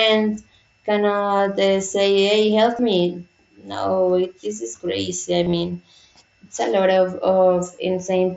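At 1.37 to 1.39 s, 2.77 s after "hey help", and 5.44 to 5.53 s after "this is crazy I", there's concealed Bluetooth headset packet loss. Dropped headset packets get patched by repeating recent waveform, giving brief buzzy blips, with the last spot a scattered warbly stretch.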